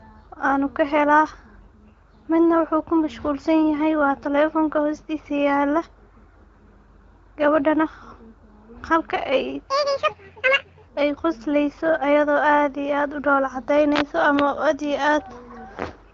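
Speech clip, carried through the AMR wideband (HD Voice) codec, with its light coding texture. From 9.68 to 10.87 s, one section plays at the wrong speed. It runs at 1.84 times normal speed. Pitch jumps with it, by about ten semitones. The speech turns high, thin and hurried, then snaps back at 10.87 s. Speed and pitch move together, so this is playback rate, not pitch shifting. The likely cause is an edit or player fitting that stretch to the wrong clock.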